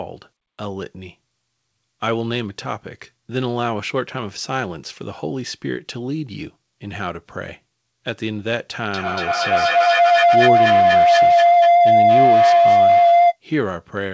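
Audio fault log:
8.94–13.4 s, feedback howl: a ringing tone near 700 Hz swells to about 10 dB above the speech, pulsing roughly every fifth of a second. A microphone-to-loudspeaker loop between two nearby devices gained level on each trip, narrowing onto that favoured frequency.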